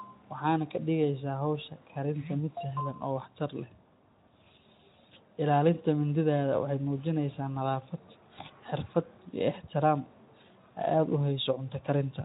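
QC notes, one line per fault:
No faults to log for this speech clip. The Speex codec, at a bitrate that points to about 15 kbps, leaves only light coding texture on the sound.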